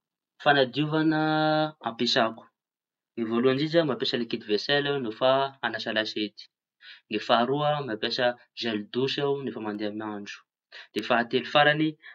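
From 1.10 s to 10.99 s, a click recurs every 1.24 s, about ten in all. These are likely clock drift buffer slips. Two clocks disagree by roughly 150 ppm. The buffer between them creeps out of step, then drops or repeats a few samples at once.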